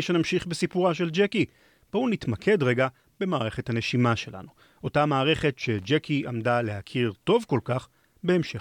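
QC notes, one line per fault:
5.79–5.85 s, loose connector crackle: a short, irregular burst of scratchy crackle lasting about 65 ms cuts across the speech. A worn or dirty contact is making and breaking as it shifts, so the signal is chopped on and off in quick succession, and any DC on the line adds pops at each break. On the waveform this shows as ragged gaps and sharp spikes; on a spectrogram, a cluster of thin broadband vertical streaks.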